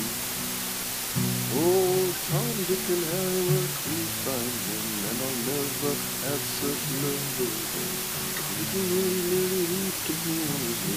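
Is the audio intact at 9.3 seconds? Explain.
No. At 9.3 seconds, as everywhere in the clip, a steady, even hiss sits about as loud as the sound itself, with no harsh crunch or grit. This is low bit depth with dither: the audio is stored with only 3 bits, so each sample snaps to one of very few levels. Random dither added before that rounding turns the coarse quantisation error into constant white noise instead of distortion.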